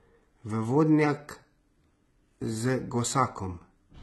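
HE-AAC compression runs through the whole speech clip, with heavy damage and nothing above about 11.8 kHz. Only the lower band sounds genuinely coded; the treble above it is likely synthesised by spectral band replication, which copies lower bands upward under a coarse envelope. The damage fits a very low bitrate of around 16 kbps. Because the copied harmonics don't line up across the crossover, s sounds come out gritty, metallic and lispy.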